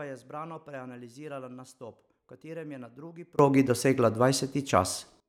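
At 3.39 s there is a sudden gain jump. The level rises by about 21 dB from one sample to the next and stays there until 5.20 s. Speech and background noise leap up together. The likely cause is a gain setting applied without a ramp.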